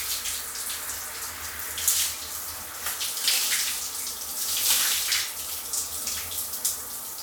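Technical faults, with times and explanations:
Nothing technical stands out here, and the recording just runs its course with no trouble to point to.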